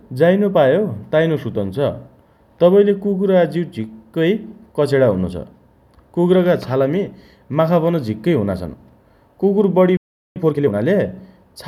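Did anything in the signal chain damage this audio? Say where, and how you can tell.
Yes. At the playback stage, the speech drops to silence from 9.97 to 10.36 s, a playback stall of about 0.39 s, likely from the player's buffer running dry.

Straight after, from 10.36 to 10.74 s, you get time-compressed catch-up. The speech runs at double speed but normal pitch, as the player splices out chunks to clear its backlog.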